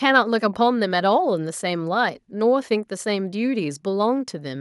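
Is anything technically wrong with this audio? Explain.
No, nothing in this speech recording points to a technical fault; the signal holds steady throughout, with no audible disruption to its level, continuity or tonal balance.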